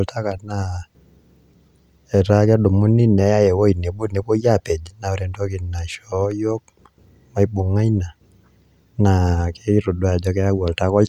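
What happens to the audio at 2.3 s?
Nothing goes wrong at 2.3 s; the speech there is intact, with no dropout, click, distortion or other fault.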